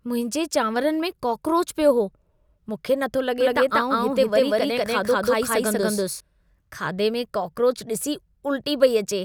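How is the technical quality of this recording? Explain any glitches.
The recording has one clear glitch, a doubled audio track from 3.40 s to 6.20 s. The likely cause is the speech being captured a second time through a slower path, or an edit leaving two copies out of step, so both get mixed together. The second copy trails the first by around a fifth of a second at roughly the same level, with no fade or room colour. It cuts in and out abruptly, and the speech is heard twice in that stretch.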